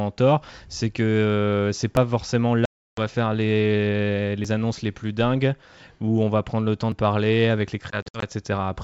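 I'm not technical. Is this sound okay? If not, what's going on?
No. The recording likely drops a tiny piece each time it finishes one 2.5-second block and starts the next, which is audio missing between chunks. You hear a short skip, about 30 ms, at 1.97 s after "que c'est", at 4.45 s between "faire les" and "annonces les plus dingues", and at 6.92 s.

The call also lost packets of data on the way, which is packet loss on an ADPCM call. The gaps were filled with silence and the receiving end briefly lost track of the sound. From 2.65 to 3.01 s there is a hard hole of about a third of a second. From 7.90 to 8.24 s, after "parler avec", several shorter dropouts cut in, the longest lasting 60 ms. After each one the sound comes back slightly distorted before settling.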